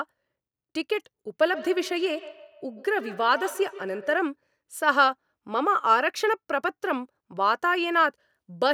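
From 1.52 to 4.31 s, feedback echo between two devices returns the speech about every 150 ms, thinner and ringing, up to about -16 dB; unlike room reverb, the repeats are discrete and evenly spaced.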